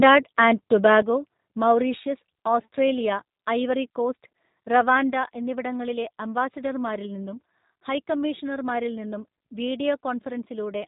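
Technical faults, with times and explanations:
Throughout, G.729 codec: the speech is rebuilt from a vocal tract model, a pitch predictor and a few pulses per frame, which fits an 8 kbit/s link. Nothing above 4 kHz survives, and the plainly audible rough, synthetic texture comes from that sparse reconstruction.
0.85 to 0.95 s, microphone overload: the loudest peaks here push about 1 dB past the converter's limit and have their tops flattened across a small fraction of the waveform. That is likely a microphone input set too hot, and it gives the syllable a brief harsh, crackly edge.
1.02 s, microphone volume stepped down: the level falls by about 6 dB in a single step, with voice and background dropping together right after the clipped peak. This is likely the call software reacting to the overload by cutting the microphone's input gain at once.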